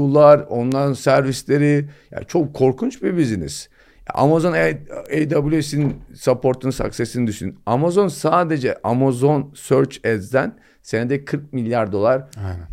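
Bit error spikes tick at 0.72, 5.06 and 8.89 s, each a flipped bit jolting a sample or few sharply. They're broadband clicks, loudest first (about -9 dBFS), then about -15 and -27 dBFS.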